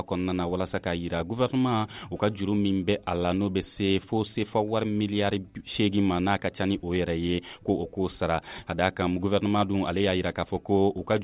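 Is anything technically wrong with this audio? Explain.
No, nothing stood out as technically wrong on listening to this audio.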